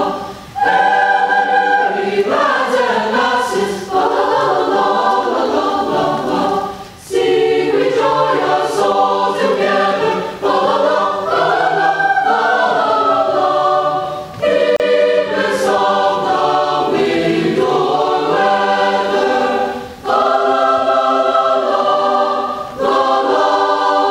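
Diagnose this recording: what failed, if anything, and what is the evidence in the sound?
The codec stage failed at a join of separately encoded pieces: encoder delay and final-frame padding were left in. The result is a gap at a join of encoded pieces, a gap of about 34 ms from 14.76 to 14.80 s, with smeared edges, before the sound resumes where it stopped.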